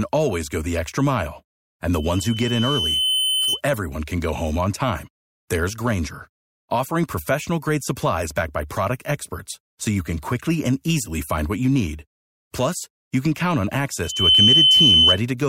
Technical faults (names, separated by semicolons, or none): loudspeaker feedback squeal